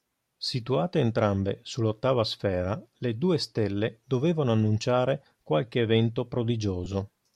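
At 6.84 to 6.86 s, lost LE Audio frames briefly break the speech. About 15 ms went missing, which fits two 7.5 ms frames. The LC3 decoder refilled the gap by repeating the last spectrum with scrambled signs. It sounds like a short, noisy smear.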